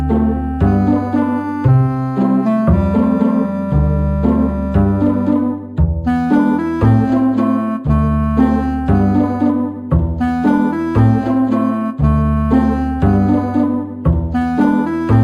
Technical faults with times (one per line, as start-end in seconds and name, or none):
0.00-15.24 imaging from linear upsampling